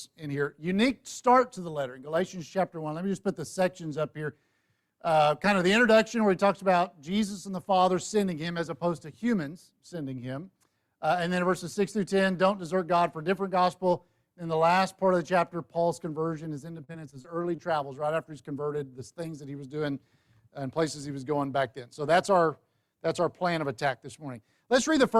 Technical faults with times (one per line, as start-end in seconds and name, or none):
16.75-17.60 repeated packet loss (robotic sound)